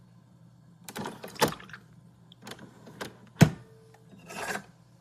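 No technical faults can be heard in this recording of sounds. Nothing in the signal path gives any sign of having gone wrong at any point.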